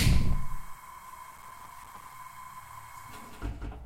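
Throughout, a doubled audio track is audible: a second full-band copy trails roughly 200 ms behind, about 5 dB quieter and uncoloured, likely from the sound being captured twice by a slower path. From 1.32 to 2.14 s, processor overload crackle appears as dense gritty tearing. Dozens of buffers of a few milliseconds each missed their deadlines and dropped to silence, leaving hard-edged gaps.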